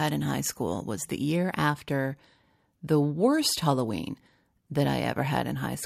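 No technical faults turn up at any point in the recording.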